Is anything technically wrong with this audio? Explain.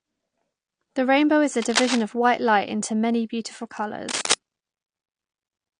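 Yes, there are three separate problems in this speech clip.

The whole thing has the dull, smeared quality of heavy lossy coding, most likely AAC compression. The sibilants and sustained vowels have that fizzy, warbly edge you get when the encoder runs short of bits and starts dropping or faking bands. The damage is plainly audible, which fits a low rate around 32 kbps with AAC-LC.

There are two bursts of cable scratch noise, rough, uneven rustling laid over the speech. The first runs from 1.62 to 2.02 s, between "rainbow is a" and "of white," at about 5 dB below the speech. The second, from 4.08 to 4.34 s just after "into many beautiful," is louder, roughly level with the speech. The likely cause is a worn lead or connector being moved, with its contact resistance jumping about rapidly.

At 2.48 s, between "of white" and "into many beautiful," there's a single sharp click, likely from dropped samples. 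Only a handful of samples, a tiny fraction of a millisecond, have gone missing, so the waveform jumps straight to a later value. No sound is lost, but that step shows up as one thin vertical line across the spectrum.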